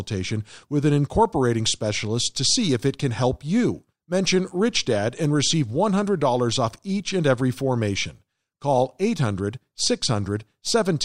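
Nothing technical stands out in this speech recording; it's a straightforward listen with no faults to point to at any moment.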